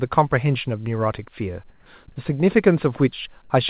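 From 1.7 to 1.86 s the background drops out and a flat, featureless hiss about 4 dB quieter takes over for 160 ms. That's comfort noise in place of the background, likely because the sender paused transmission and the receiver synthesised filler.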